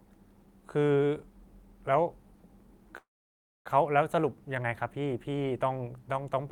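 At 2.97 s the speech stalls in a call audio freeze that runs to 3.68 s. You get a short trailing buzz carried over from the last sound, then roughly 0.6 s of near silence before the talker picks up exactly where they left off. Nothing seems dropped; the gap just pushes everything after it about 0.68 s later. That's likely packets getting held up in transit until the jitter buffer ran dry.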